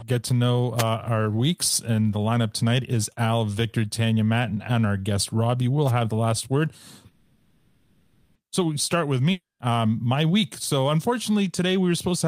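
At 0.77 s, just after "to know" and before "our weeks and the", and again at 5.87 s, just before "have the last word", there is a wireless microphone noise hit. A brief swish of static, about 50 to 60 ms, rises as the analogue FM radio signal fades when reflections cancel. It leaves no gap.

From 7.11 to 8.37 s a call audio freeze stretches the last sound into a fading buzz or hiss for about 1.24 s, with no silence. Speech then resumes exactly where it stopped, so nothing is lost and the delay grows by that amount. The likely cause is packets held up in transit until the jitter buffer ran empty.

Between 9.31 and 9.61 s, after "we start with" and before "um my week", a long network dropout gives a short fading fill followed by about 180 ms of silence. Unlike the freeze, speech returns further along, with about 280 ms of audio missing, likely because those packets never arrived.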